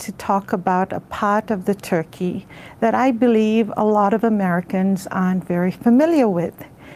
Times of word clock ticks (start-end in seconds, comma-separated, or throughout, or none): none